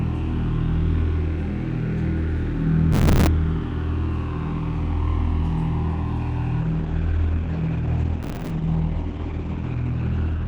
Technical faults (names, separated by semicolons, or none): processor overload crackle; adaptive stream at a lower bitrate